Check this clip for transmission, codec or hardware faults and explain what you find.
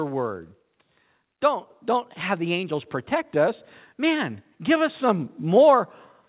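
One fault is present in this speech. From 1.41 to 5.87 s, voice and background swell together by about 6 dB. This is automatic gain rising: the gain control judged the input too quiet and raised its gain gradually. The call path band-limits everything, with nothing above 4 kHz, which points to G.711 mu-law coding.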